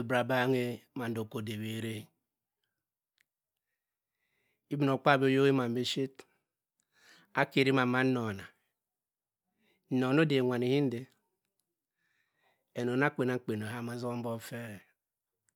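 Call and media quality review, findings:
Nothing stood out on listening to this speech recording.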